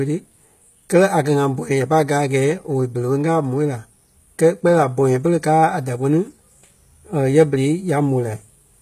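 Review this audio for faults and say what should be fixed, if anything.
The speech has plainly audible HE-AAC compression throughout: sibilants sound gritty and metallic, likely from spectral band replication at a low bitrate near 20 kbps. A spectrogram shows smeared, repeated treble patterns above a crossover and nothing above 14.9 kHz. Encode at a higher bitrate with plain AAC or a lossless format to prevent it.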